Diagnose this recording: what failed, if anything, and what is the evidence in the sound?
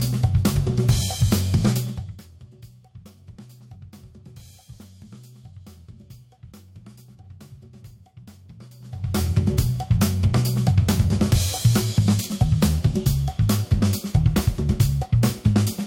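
Nothing failed; no stage shows any fault.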